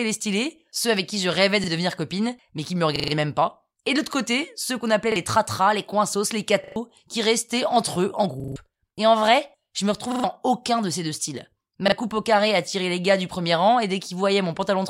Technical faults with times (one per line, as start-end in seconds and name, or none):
1.64-1.68 repeated buffer
2.96-3.12 repeated buffer
5.12-5.16 repeated buffer
6.64-6.76 repeated buffer
8.40-8.56 repeated buffer
10.12-10.24 repeated buffer
11.88-11.92 repeated buffer